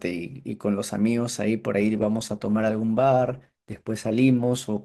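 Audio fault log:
1.81 s to the end, adaptive stream at a lower bitrate: right at 1.81 s the speech abruptly picks up swirly codec artefacts, with no gap or dropout at the switch. That's the player falling back to a cheaper version of the stream when the connection slowed. The change in character fits a step down from about 64 kbit/s Opus to 16 kbit/s, where the encoder sacrifices treble detail first.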